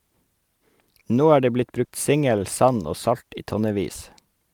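At 1.84 to 1.90 s, after "det blitt" and before "singel sand og salt", a burst of packet loss: about 50 ms is concealed by continuing the last sound and fading it out, then speech skips ahead. A spectrogram shows the last sound held flat and dimming, then an abrupt jump.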